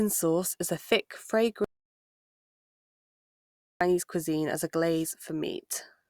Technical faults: audio dropout to silence

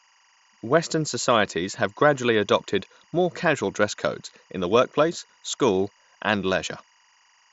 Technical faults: timecode bleed

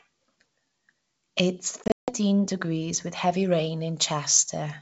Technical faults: packet loss on an ADPCM call; pre-emphasis left on

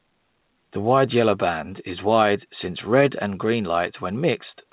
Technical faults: none

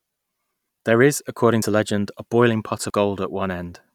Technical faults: dropped buffer (overrun)

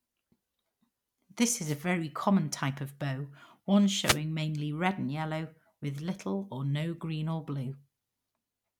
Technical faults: wireless microphone noise hit

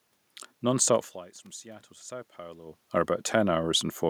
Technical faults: electrical switching spike

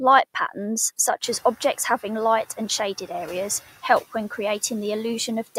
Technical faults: noise suppressor artifacts; noise suppressor catching up

